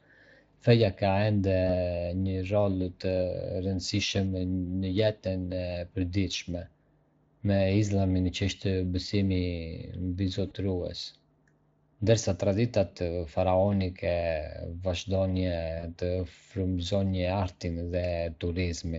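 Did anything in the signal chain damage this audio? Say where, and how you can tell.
Yes. At the network stage, VoIP packet loss concealed by the speech codec occurs at 1.67, 10.47–10.54 and 15.79–15.86 s. Each gap is 20 to 40 ms, and the Speex decoder stretches the last pitch and filter into a buzzy tone or coloured noise that fades. On a spectrogram this shows as frozen, flattened harmonics, and the waveform shows a decaying envelope.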